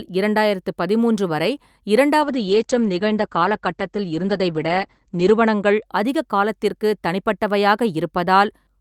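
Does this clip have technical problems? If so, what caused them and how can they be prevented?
Yes. From 2.23 to 5.91 s, a call bitrate drop takes the speech from 64 to 11 kbps, bottoming out for about 3.1 s. Opus codes it coarsely and cuts everything above 8 kHz, so it sounds muffled and watery until "அதிகக் காலத்திற்கு". A spectrogram shows the band above 8 kHz abruptly emptied. Preventing it means keeping the network path stable and uncongested, or setting a higher minimum bitrate, so the bandwidth estimate never collapses that far.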